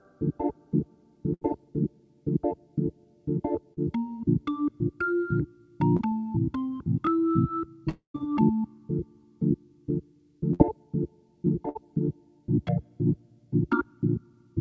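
A call recording carried over a wideband call codec, with nothing above 8 kHz, which fits G.722 at 64 kbps, has three kinds of gap. Bursts of packet loss appear at 1.34 to 1.43 s, 10.54 to 10.61 s and 11.69 to 11.77 s. Each sounds like the last sound being held as a buzz or hiss that fades, then the audio jumps ahead. A run of packets arrived too late or not at all, and the receiver stretched the final sound to cover the hole: roughly 70 ms of fill for 80 ms lost at 1.34 s, and about 60 ms lost in each of the later two. Short concealed packet losses at 3.73 to 3.79 s and 5.97 to 6.01 s are briefer, a quick smear or wobble where a moment simply slips past. About 40 ms and 20 ms went missing, and the decoder patched each with a continuation of the preceding sound before blending back into real audio. A long network dropout runs from 7.89 to 8.16 s. The sound stretches into a fading buzz or hiss that ends in around 120 ms of silence, filling about a quarter of a second in all, then resumes further along with roughly 260 ms of the original gone. 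The likely cause is an interruption in which no audio reached the receiver for that whole stretch, leaving concealment to fill it until it gave up.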